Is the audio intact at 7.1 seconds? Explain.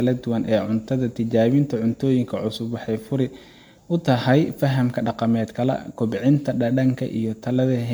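No. At 7.1 seconds the speech carries generation loss, which runs through the whole clip. The sound is swirly, smeared and hollow, and consonant attacks blur. This is likely from repeated MP3 encoding at 128 kbit/s, around ten passes. Each pass quantises again on a shifted frame grid, so noise and spectral gaps stack up. The damage exceeds what one encode at that bitrate would leave. Nothing remains above 19.9 kHz.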